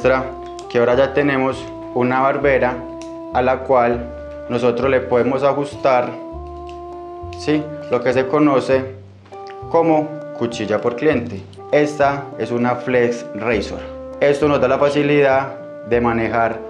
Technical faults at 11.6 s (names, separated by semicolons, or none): none